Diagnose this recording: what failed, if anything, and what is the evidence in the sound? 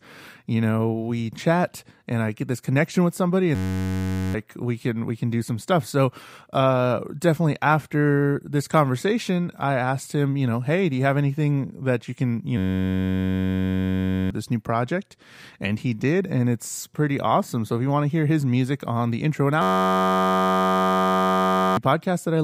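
A system hang loop at the driver or buffer stage: at 3.55–4.34 s, 12.58–14.30 s and 19.62–21.77 s, speech freezes into a steady 93.8 Hz buzz. One 10.67 ms slice repeats exactly, which fits a 512-sample buffer. Unlike a dropout, nothing goes silent. The hardware keeps replaying stale audio.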